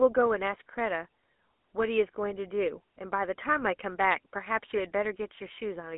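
Throughout, GSM full-rate codec coding, consistent with 13 kbit/s, confines the speech to roughly 250 Hz–3.4 kHz, with nothing above 3.8 kHz. Its pulse-driven excitation leaves an audible buzzy, gravelly roughness.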